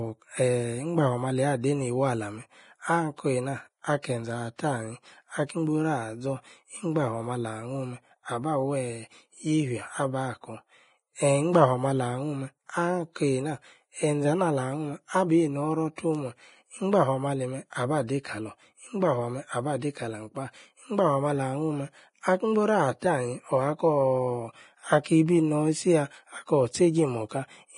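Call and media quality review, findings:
Hissy, grainy treble with roughened tones and nothing above 10.6 kHz throughout; likely Vorbis compression at heavy damage, consistent with roughly 29 kbps, coarse residue quantisation turning detail into noise.

Pre-echo at 4.02 s, 15.96–15.98 s, 25.04–25.06 s and 27.29–27.31 s: short hiss of about 20 ms ahead of sharp onsets, as block-wide quantisation noise spreads before the attack.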